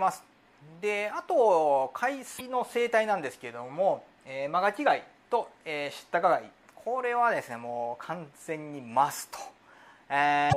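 At 2.37 to 2.41 s and again at 10.49 to 10.54 s, the compressed stream carries damaged data: bytes in those frames are wrong, so the decoder misreads or rejects them, loses frame sync and hunts for the next valid header before resuming. Each event lasts only about 40 to 50 ms and comes through as a short, harsh blip or squawk that breaks the sound's continuity, the second one falling just before the clip ends.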